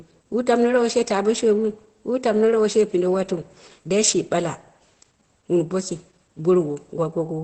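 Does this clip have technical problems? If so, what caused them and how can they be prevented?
Yes. Opus voice compression affects the whole clip: the speech sounds muffled and hoarse, with nothing above about 8.7 kHz, which fits the SILK linear-prediction coder running in wideband mode. At this setting the codec keeps only a coarse model of the vocal excitation, so the grainy, slightly robotic texture is plainly audible, pointing to a low bitrate of around 12 kbps. To prevent it, encode at a higher bitrate, such as 24 kbps or more, or keep an uncompressed copy.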